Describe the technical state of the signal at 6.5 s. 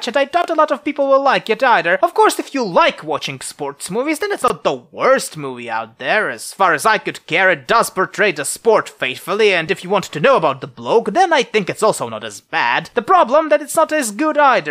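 At 6.5 s the signal is intact, with no dropout, distortion or other fault audible at that moment.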